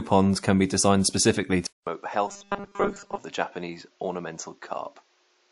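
Throughout, the speech carries smeared, layered compression artefacts with nothing above 11.2 kHz. This likely comes from transcoding between lossy codecs, consistent with an MP3 pass followed by WMA.

At 1.67 s a 200 ms silence gives way to duller, boxier sound about 10 dB quieter, with a narrower band and new background noise. The likely cause is an input switched to a poorer device.

From 2.28 to 3.17 s the speech becomes a rigid metallic buzz at 200 Hz, robotic sound from repeated short buffers, likely with 5 ms chunks replayed while most real audio is skipped.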